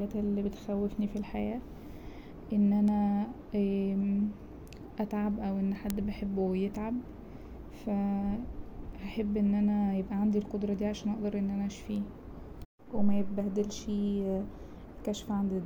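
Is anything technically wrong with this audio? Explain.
Yes. Starting at 1.37 s, right after "اللي بتخوفني في", and continuing to 14.99 s, there are word clock ticks. The receiving device on a digital link runs on its own clock instead of locking to the sender's. The two drift apart by roughly 15 parts per million, so the clocks slip past each other about every 1.5 seconds. At each slip a few samples are misread and a single sample is dropped or repeated. The result is around ten short, sharp ticks at a steady rate across the speech.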